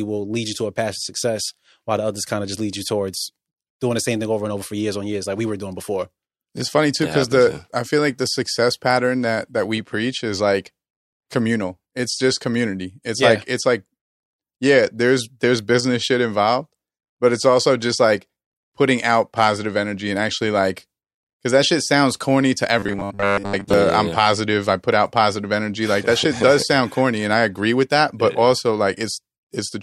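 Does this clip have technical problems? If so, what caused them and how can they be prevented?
Yes. From 22.79 to 23.74 s, between "shit sounds corny to" and "yeah yeah I'm yeah", the speech becomes robotic sound from repeated short buffers. A rigid 100 Hz buzz covers most of the stretch, likely from a 10 ms chunk replayed while fresh audio arrived too seldom. A larger jitter buffer and steady network and CPU delivery prevent it.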